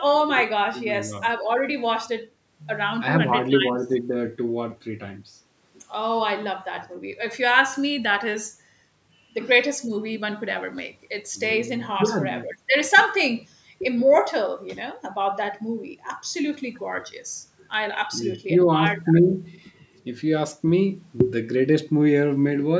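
The speech carries no technical faults, and the call microphone processing it passed through simply trims the lowest bass and leaves nothing above 8 kHz, which is expected for that path.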